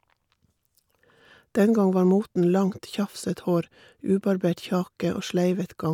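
No technical faults can be heard anywhere in this speech recording. There is nothing in the audio that calls for a timestamp or an explanation.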